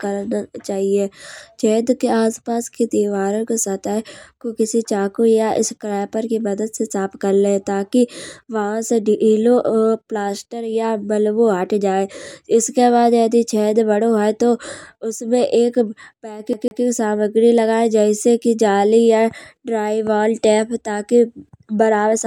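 At 16.53 s the speech hits a CD stuck on one turn: a scratch throws the laser back, replaying a 148 ms slice twice with short mutes until 16.83 s, just before "सामग्री लगाए". The waveform shows identical repeated blocks separated by brief gaps.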